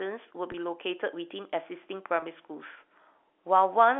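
At 0.52 s and again at 2.20 s, a packet is lost, which fits a single 20 ms packet each time. The receiver bridges it by repeating the last pitch period, so the speech briefly holds as a slightly buzzy, sustained tone within the narrow G.711 telephone band.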